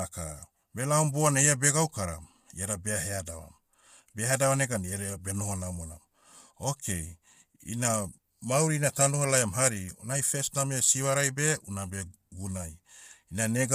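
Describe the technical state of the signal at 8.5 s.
Low-delay AAC compression is at work at 8.5 s, as it is across the whole recording. The speech sounds rough and grainy, with noise filling the gaps between pitch harmonics and nothing above 15.6 kHz. The likely cause is AAC-ELD, the video-call codec whose short frames, around 10 ms, code about 500 frequency lines each with a low-delay window; the plainly audible damage fits a bitrate near 32 kbps.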